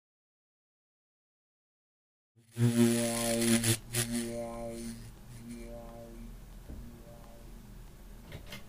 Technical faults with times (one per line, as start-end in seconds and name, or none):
none